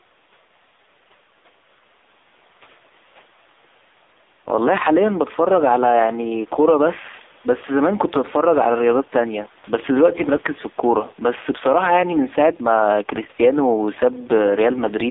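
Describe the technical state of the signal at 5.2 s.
At 5.2 s you're hearing gain pumping, running through the whole clip. The level dips a few dB under each loud syllable, likely from a fast limiter riding a gain set too hot. The AMR narrowband mobile codec is also there throughout. The band sits between about 300 Hz and 3.7 kHz, and the heavy buzzy, synthetic texture fits a low mode around 5.9 kbps.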